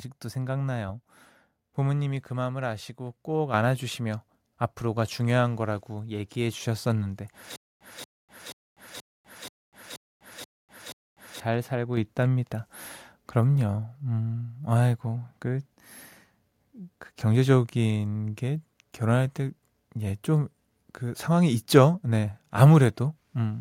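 In this speech recording, the call software twice judged the microphone too quiet and raised its input volume in one step, a microphone volume step-up. At 3.54 s and again at 11.97 s, voice and background jump together by about 6 dB and then about 4 dB. From 7.56 to 11.40 s, the stream likely stalled and replayed its last fragment on each retry, producing a stutter with silent gaps. A 233 ms burst repeats eight times every 480 ms, separated by 247 ms of digital silence, and the audio that should have played during that stretch is lost.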